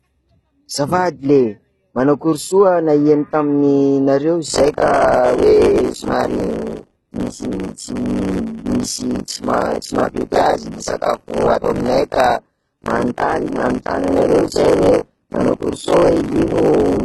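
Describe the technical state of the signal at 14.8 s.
At 14.8 s the speech has nothing above 11.8 kHz and heavy codec damage, with a gritty, metallic treble. HE-AAC compression is the likely cause, at a rate that points to about 16 kbps.

The same moment falls inside buffer tearing, which runs from 4.48 s to the end. Most of each buffer replays audio about 40 ms old, producing a robotic 50 Hz buzz.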